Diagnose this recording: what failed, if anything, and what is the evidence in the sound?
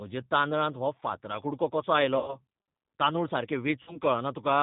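G.729 codec damage runs through the whole speech clip. Everything above 4 kHz is missing, and the voice sounds rough and slightly synthetic, which fits an 8 kbit/s G.729A encoder. It rebuilds each 10 ms frame from a vocal tract filter, a pitch predictor and a few pulses.

VoIP packet loss concealed by the speech codec occurs at 2.18–2.38 s, just after "हो फातरा कुडको कसो", and at 3.83–4.00 s. A network fault removed about 100 ms and 40 ms of audio, which fits five and two lost packets. The decoder stretched its last pitch and filter into a fading buzzy tone or coloured noise, and the speech stayed weak after packets resumed.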